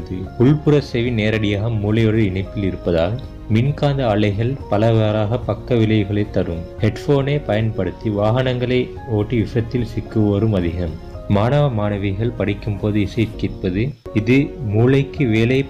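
No technical faults are audible anywhere in the recording.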